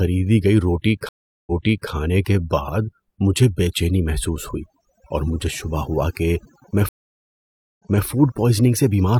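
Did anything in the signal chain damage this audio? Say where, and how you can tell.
Yes. Throughout the clip there is a near-silent background with twinkling specks. This is overdone noise removal in the processing stage: an over-strong reduction pulls individual frequency bands down whenever they sit near its noise estimate, taking quiet speech detail with them.

Twice the audio drops out and then jumps backward. After "گئی روٹی" at 1.09 s there is about 0.38 s of silence, and playback resumes roughly 0.43 s earlier, leading into "کے بعد مجھے بے" by 1.90 s. After "شبہ ہوا کہ میں" at 6.89 s, a 0.91 s gap ends with a 0.26 s rewind, settling by 8.06 s. This is a stream reconnect at the network stage, where the server resent a burst to a freshly started decoder.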